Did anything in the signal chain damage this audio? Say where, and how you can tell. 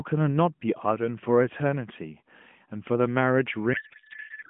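Yes. At the codec stage, a codec payload misread from 3.74 s to the end: the AMR speech turns into garbled warbling noise that barely tracks it, which fits octet-aligned frames being unpacked as bandwidth-efficient. On a spectrogram the narrowband harmonics give way to smeared, structureless energy below 4 kHz.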